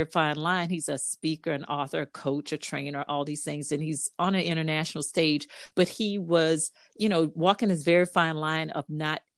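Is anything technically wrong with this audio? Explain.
Yes. The speech has a burst of packet loss from 5.65 to 5.74 s. Several consecutive packets failed to arrive in time to be played. The receiver covered the gap by extending the last sound it had and lowering its level, for about 52 ms. That concealment is audible as a brief held buzz or fading hiss in place of real speech. The sound then picks up later, and about 60 ms of speech is simply gone.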